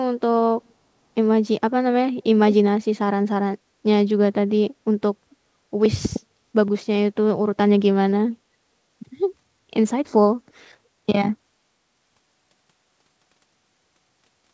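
From 0.65 to 0.73 s a very faint, delayed copy of the speech appears, trailing the original by about 370 ms. This is likely an echo leak: the far end's echo canceller let a trace of its loudspeaker pickup return down the line.

At 6.68 s there is a small jump in the speech, a few milliseconds of audio skipped outright rather than replaced by silence. This points to a dropped buffer (overrun), likely from samples overwritten before the software read them.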